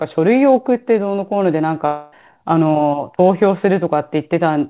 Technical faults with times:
1.86-2.14 long network dropout

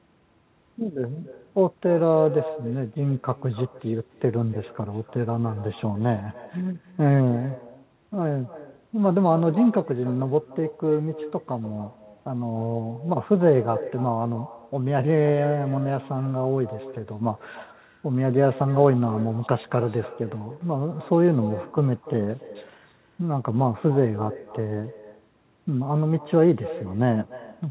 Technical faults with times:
0.00-27.70 echo with no canceller

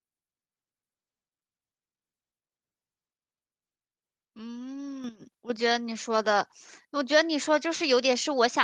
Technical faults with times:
5.04 microphone volume stepped up

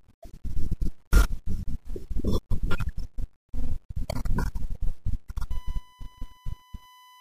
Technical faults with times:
5.51-7.21 USB whine

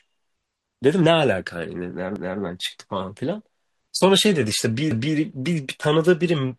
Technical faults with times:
2.16-2.41 overlapping chunks
4.91-5.16 overlapping chunks

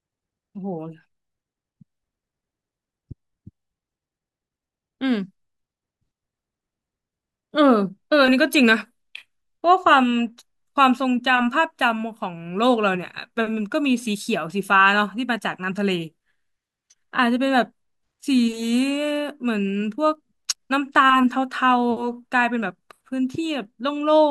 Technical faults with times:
18.30-24.30 resampler restarted on every block

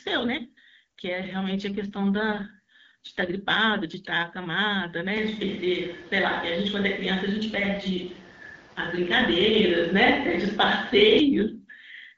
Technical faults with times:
1.73-3.34 AMR rate drop
5.17-11.19 switch to a distant microphone
7.45-9.66 AMR rate drop

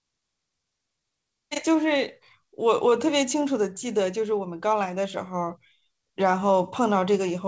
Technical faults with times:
0.00-7.48 clock drift between sender and receiver
0.20-7.46 repeated timing corrections

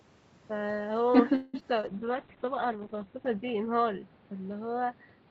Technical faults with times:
1.35-1.56 call audio freeze
1.60-1.85 short concealed packet loss
1.88-5.31 call bitrate drop

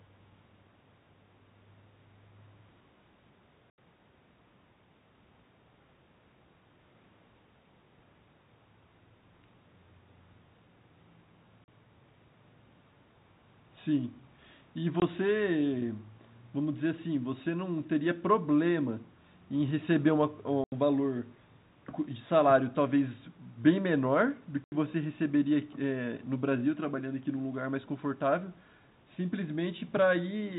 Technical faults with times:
3.70-3.78 packet loss filled with silence
11.64-11.68 packet loss filled with silence
15.00 packet loss filled with silence
20.64-20.72 packet loss filled with silence
24.64-24.72 packet loss filled with silence

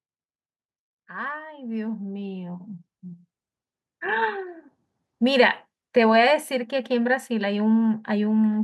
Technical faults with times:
1.11-3.32 automatic gain rising

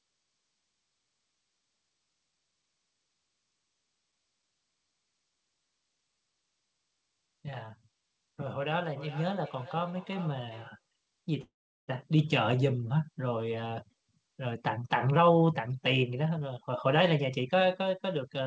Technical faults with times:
8.96-10.82 feedback echo between two devices
11.42-11.91 call audio freeze
14.44-17.75 jitter buffer speed-up

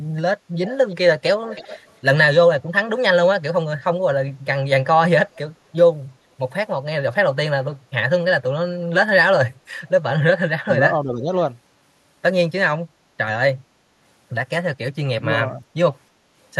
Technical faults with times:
0.65-0.96 echo leak
1.45-1.93 echo leak
10.64-11.29 speech suppressed in double talk
15.54-15.63 speech suppressed in double talk

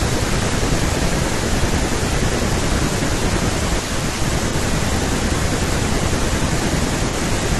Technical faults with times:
4.49-4.55 AAC frame loss with concealment
7.09-7.15 AAC frame loss with concealment

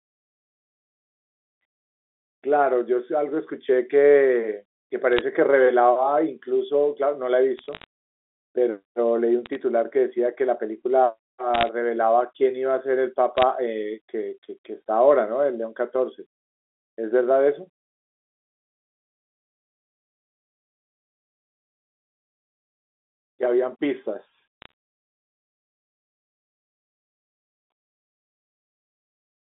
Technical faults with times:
5.13-5.21 bit errors on a digital phone line
7.58-7.84 bit errors on a digital phone line
9.46-9.55 bit errors on a digital phone line
11.54-11.69 bit errors on a digital phone line
13.38-13.43 bit errors on a digital phone line
24.62-24.71 bit errors on a digital phone line

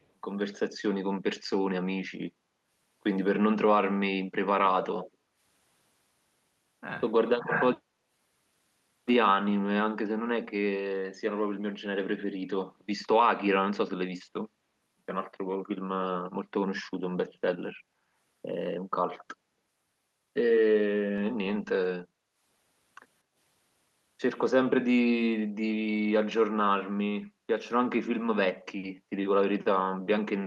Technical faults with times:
0.02-0.06 echo leak
4.65-5.11 echo leak
5.11-5.38 background gated by the echo canceller
7.26-7.30 echo leak
22.08-22.37 background gated by the echo canceller
23.24-23.35 background gated by the echo canceller
27.34-27.47 background gated by the echo canceller

